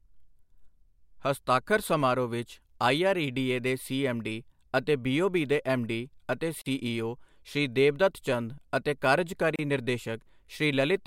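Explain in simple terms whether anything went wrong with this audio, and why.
Something did go wrong: the speech drops out briefly twice, at 6.62 s for about 45 ms and at 9.56 s for about 31 ms. These are gaps at a join of encoded pieces. The audio was compressed in separate chunks and stuck back together without trimming. Each chunk brings a bit of built-in silence at its start and padding at its end, so you hear a tiny hole with smeared edges before the speech carries straight on.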